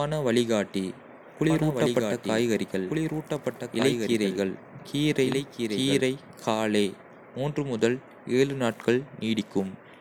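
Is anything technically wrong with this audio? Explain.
Yes. From 1.50 s to 6.00 s there is a doubled audio track. The speech is likely being captured twice, with a second, slower path delivering the same signal about one and a half seconds late. The two copies are mixed together. The late copy sits roughly 5 dB below the original and is full-band, with no reverb tail or room colouring. It cuts in and out abruptly at both ends rather than fading.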